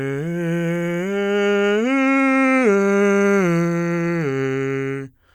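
Nothing goes wrong technically anywhere in this bit of music, so there's no fault to point to at any moment.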